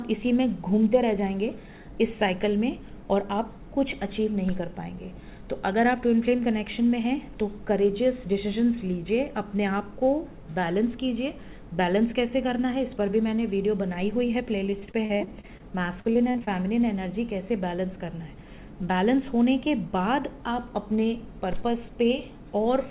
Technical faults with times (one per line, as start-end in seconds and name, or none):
14.70-15.61 repeated packet loss (robotic sound)
16.01-16.49 repeated packet loss (robotic sound)